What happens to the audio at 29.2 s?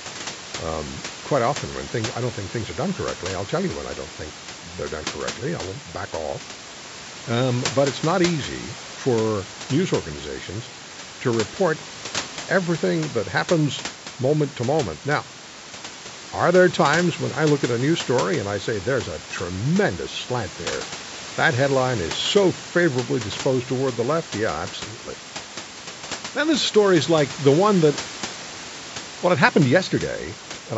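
Nothing goes wrong at 29.2 s: the speech carries on intact, with only the usual call-microphone bandwidth and the room's background noise sitting about 17 dB below it.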